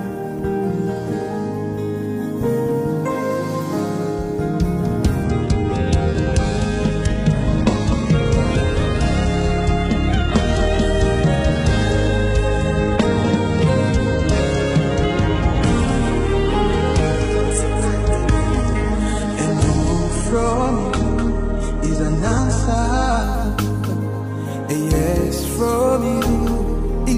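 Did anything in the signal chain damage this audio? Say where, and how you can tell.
Yes. Doubled audio track, throughout the clip: a second full-band copy of the sound runs about 300 ms behind the original and roughly 10 dB quieter. It has no decay or room colour, so it is not an echo from a space. It is most likely a capture or playback stage picking up the same signal twice by a slower path, or an edit that holds two unaligned copies.

Adaptive stream at a lower bitrate, from 5.23 s to 23.23 s: at 5.23 s the quality drops abruptly with no gap, codec artefacts rise, and nothing remains above 11 kHz. At 23.23 s the fuller sound returns just as suddenly. This is a network-driven codec switch. The stream fell back to a much leaner encoding while the connection was slow, which fits a move from AAC-LC around 96 kbit/s to HE-AAC around 12 kbit/s.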